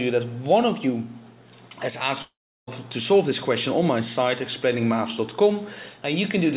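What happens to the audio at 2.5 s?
At 2.5 s the sound is inside a long network dropout running from 2.22 to 2.69 s, likely caused by a stretch of lost packets. The receiver briefly extends the last sound as a fading buzz, then leaves near silence for roughly a third of a second before the audio resumes with the missing portion gone. On a waveform this appears as a decaying tail flattening almost to zero; a spectrogram shows a smeared, fading band, then an empty gap below the 4 kHz ceiling.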